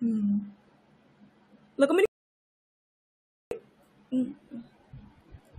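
At 2.06 s the speech drops out to silence and stays gone until 3.51 s, so you get roughly a 1.46 s hole. That's a rebuffering stall: the player used up everything it had downloaded and just sat waiting for more data. When it picks back up, the speech carries on from exactly the point where it stopped, so nothing's missing. The stall simply stretches the clip out by that extra gap.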